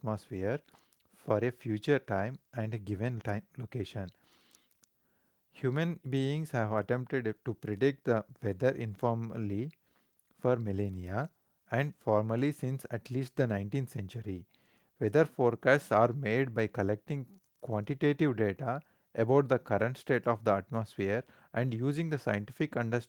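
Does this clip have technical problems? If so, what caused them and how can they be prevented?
No, this clip does not have technical problems.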